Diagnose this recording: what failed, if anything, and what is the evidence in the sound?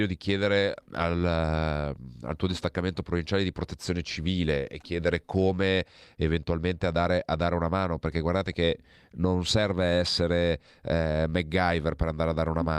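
Nothing failed: no stage from capture through to playback leaves an audible mark on the speech.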